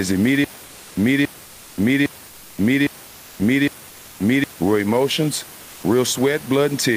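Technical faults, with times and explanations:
0.44 to 4.44 s, stutter with silent gaps: the same 281 ms fragment of speech plays five times, each followed by 527 ms of digital silence, so it returns on a steady 808 ms cycle before normal playback resumes just ahead of "real emotions". The likely cause is a stalled stream that replayed its last buffered fragment at each retry and then ran dry. What sets it apart from a simple dropout is the identical repeated burst and the true digital silence between repeats. The speech that belonged in this span is gone.
0.65 to 0.95 s and 2.27 to 2.57 s, comfort noise in place of the background: for 300 ms each time, the real room noise, which sits about 22 dB under the speech, gives way to a smooth, featureless hiss about 1 dB and then about 2 dB quieter. This likely comes from discontinuous transmission in the Opus codec, where the receiver synthesises noise during pauses. 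Unlike a noise gate, the gap is filled with noise rather than silence.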